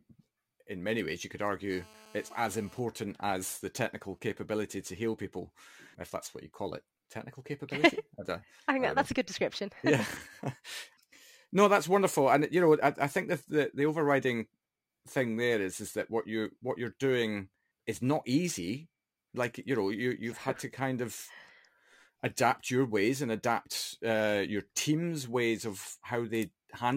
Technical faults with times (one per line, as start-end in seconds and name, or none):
1.70-2.79 GSM phone buzz
2.89-4.45 GSM signalling bursts